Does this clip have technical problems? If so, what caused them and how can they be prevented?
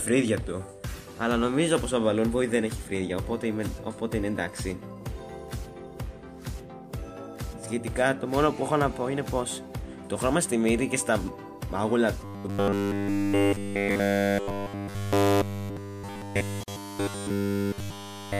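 Yes. From 12.25 s to the end, the sound collapses into a rigid, metallic buzz fixed at 100 Hz. It loosely tracks the original contour. This is robotic sound from repeated short buffers. New audio was likely arriving too slowly, so the playback software kept looping its last fragment, roughly 10 ms long, while the real audio was skipped. That loop sets the buzz at 100 Hz, and it persists through essentially the whole stretch. Prevention: give the audio path enough buffering and processing headroom that fresh data always arrives before the playback buffer runs dry.

Within that stretch, a hole of about 45 ms opens from 16.63 s to 16.68 s. The sound drops out with smeared edges and then resumes exactly where it left off. This is a gap at a join of encoded pieces. Two separately encoded sections were butted together, and the encoder's start-up delay and end-of-stream padding were left in, creating the silence. 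Prevention: trim encoder delay and padding using gapless metadata, or encode the material as one continuous stream before joining.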